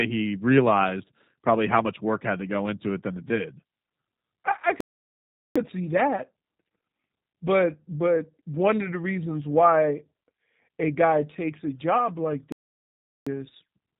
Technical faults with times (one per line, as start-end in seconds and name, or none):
0.00-14.00 G.729 codec
4.80-5.56 playback stall
12.52-13.27 playback stall